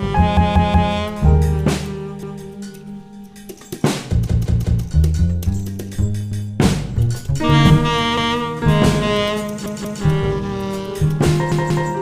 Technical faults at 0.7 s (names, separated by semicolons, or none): repeated buffer